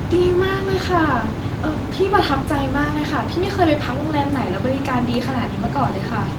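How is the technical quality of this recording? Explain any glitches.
No glitches are audible; the Opus voice compression runs at 24 kbps in hybrid mode and keeps the full band up to about 20.1 kHz.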